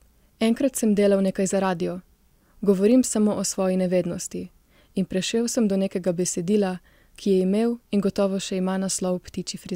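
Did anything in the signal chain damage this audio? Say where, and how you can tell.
No, nothing in the signal chain has left an audible mark on this speech at any stage, from capture through to playback.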